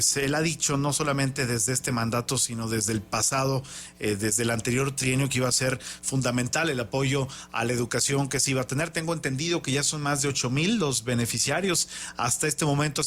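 Nothing stood out as a technical fault on listening to the clip.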